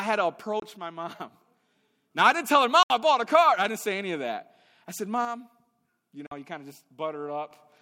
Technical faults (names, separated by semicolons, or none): Bluetooth dropout; one channel drops out